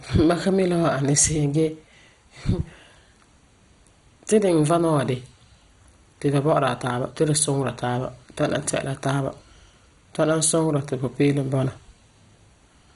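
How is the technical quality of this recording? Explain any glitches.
The recording is quite degraded, with one problem running through the whole speech clip. From start to finish it has the sound of MP2 compression, likely from a low bitrate around 56 kbps. Layer II divides the spectrum into 32 sub-bands and rations bits, so upper bands vanish, with nothing above 11.2 kHz, and surviving bands flicker and quantise coarsely, giving a dull, gurgly, grainy texture.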